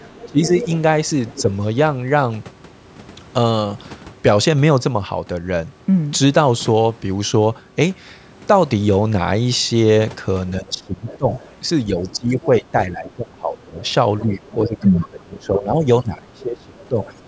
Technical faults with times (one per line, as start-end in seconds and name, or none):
0.00-0.51 speech suppressed in double talk
0.14-1.53 other side's voice leaking through
10.49-14.78 other side's voice leaking through
10.59-17.27 speech suppressed in double talk
16.41-17.10 other side's voice leaking through